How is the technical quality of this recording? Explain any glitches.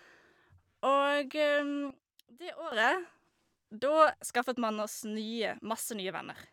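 The recording has one clear glitch. At 1.90 to 2.72 s a sudden gain jump, likely an unramped gain change, drops speech and noise together by about 15 dB, showing as an abrupt waveform step and uniformly dimmed spectrogram.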